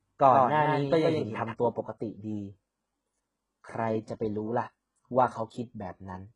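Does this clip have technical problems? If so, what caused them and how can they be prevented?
Yes. HE-AAC compression is audible throughout the speech: the top of the spectrum stops dead at 11 kHz, and the treble below that line sounds synthetic rather than captured. This is likely HE-AAC coding, where only the lower band is truly encoded and the upper band is rebuilt by copying lower content upward under a coarse envelope, so s sounds come out gritty and lispy. The heavy damage fits a very low bitrate, around 12 kbps. Prevent it by encoding at a higher bitrate with a full-band codec mode rather than band replication.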